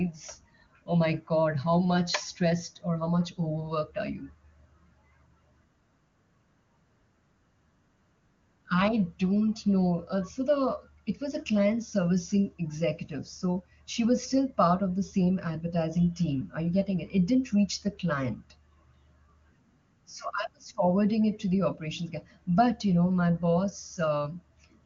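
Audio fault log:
Nothing stood out on listening to this speech, which has the 7 kHz bandwidth of an AMR wideband (HD Voice) call at a high rate.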